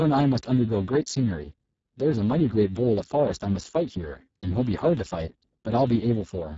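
From start to finish the speech sounds hoarse, grainy and somewhat robotic, with a noisy buzz riding on every syllable and a hissy, artificial top end that stops dead at about 7.7 kHz. This is heavy Speex codec damage. The coder has too few bits to describe the excitation that drives its speech model, a starvation that points to a very low setting of roughly 5.8 kbps, so fine vocal detail is replaced with noise.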